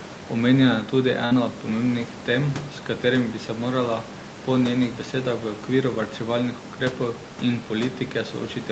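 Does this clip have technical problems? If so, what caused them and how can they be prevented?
Yes. A burst of packet loss at 1.25 to 1.33 s, after "je tudi" and before "od pomembnih tem s", stretches the last sound into a fading buzz for 55 ms, then skips 60 ms. A spectrogram shows flat, dimming harmonics, then an abrupt jump. Opus in-band FEC and a steadier network would prevent this.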